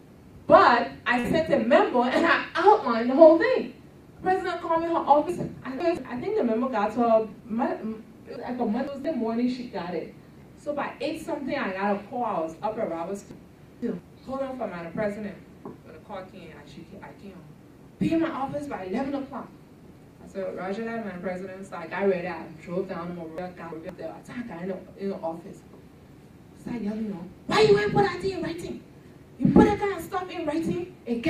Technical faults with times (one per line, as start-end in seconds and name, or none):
1.19-1.27 short stall from a late packet
5.29-5.97 chunks out of order
6.98-7.42 jitter buffer speed-up
8.36-9.05 chunks out of order
13.31-13.99 chunks out of order
23.38-23.89 chunks out of order